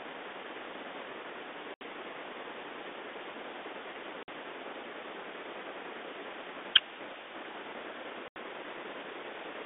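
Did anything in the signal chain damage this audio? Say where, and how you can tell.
Yes. The network stage did it, through packet loss on an ADPCM call. Hard-edged silent holes fall at 1.74–1.82 s, 4.23–4.29 s and 8.28–8.37 s. Speech then returns slightly distorted. The decoder's adaptive predictor and step size had drifted from the sender's.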